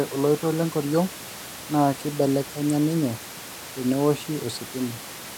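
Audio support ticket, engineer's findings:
No system fault found on the speech path; the only background is room noise at the microphone, about 18 dB below the speech, which belongs to the recording itself.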